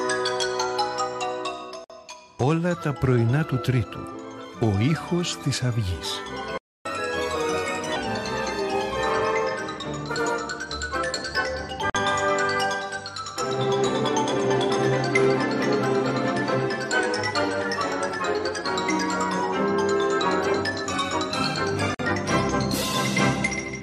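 At 1.84 s a gap at a join of encoded pieces opens, about 55 ms of silence with smeared edges. The same dropout returns at 11.90 s and 21.95 s (about 48 ms each), a 10 s spacing that points to separately encoded segments joined without trimming their start delay and end padding.

At 6.58 s the sound halts for 276 ms, a playback stall most likely caused by the player running out of buffered data.

From 6.86 s to 7.96 s comes catch-up at higher speed: playback runs at 1.25x, pitch rising about four semitones, as the backlog is resampled to recover lost time before settling back to normal.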